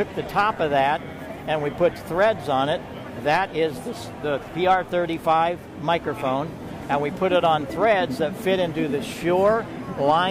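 No technical faults are audible.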